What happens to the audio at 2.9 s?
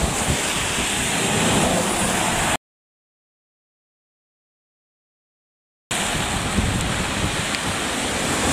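At 2.9 s the audio has dropped out to dead silence. The gap runs from 2.56 to 5.91 s. The input was likely lost while zeros kept being written.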